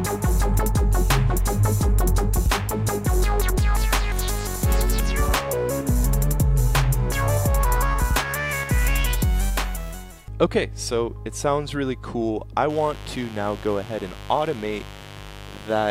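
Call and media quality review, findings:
Mains buzz, 12.70 s to the end at 15.90 s. Steady, raspy buzz, roughly 20 dB below the signal. 50 Hz supply. Probable source: dimmer, rectifier or unshielded cable. Switching spikes twice per cycle push harmonics into the kilohertz range.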